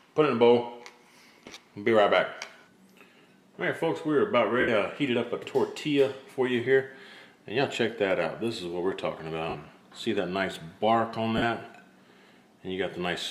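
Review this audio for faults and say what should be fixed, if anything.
Lost LE Audio frames: the Bluetooth link dropped frames, and the LC3 decoder filled each gap by reusing the last spectrum with random signs, smearing the sound into noise at 1.46 s (60 ms lost across 105 ms, runs around 20 ms), 4.60 s (75 ms), 9.49 s (52.5 ms) and 11.37 s (45 ms).

Improving the radio link, through shorter range, less 2.4 GHz interference or more retransmission margin, would prevent these dropouts.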